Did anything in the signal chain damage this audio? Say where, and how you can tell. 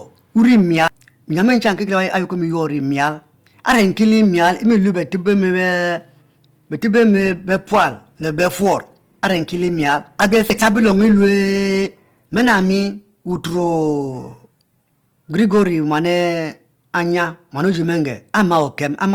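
Yes. Hard clipping runs through the whole clip at a gain or conversion stage: overdriven by about 11 dB, a small share of peaks get sliced flat, adding crackly harmonics.

From 7.18 to 15.18 s the network's adaptive stream drops to a lower bitrate. Codec artefacts rise suddenly with no gap, which fits Opus stepping from 64 to 16 kbit/s.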